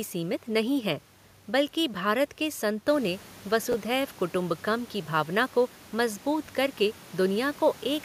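At 3.72 to 3.74 s, just after "के संतों ने" and before "कुटुम्बकम की भावना को", a brief jumble marks chunks out of order. A 10 ms chunk of speech arrives one chunk late and plays after its successor. At 6.46 to 6.49 s, after "की भावना को मजबूत", a chunk plays two chunks late. Unlike a dropout, nothing is missing. The sound is reshuffled, and there are three hard joins. Background room noise rises by about 13 dB near 3 s and stays about 22 dB below the speech.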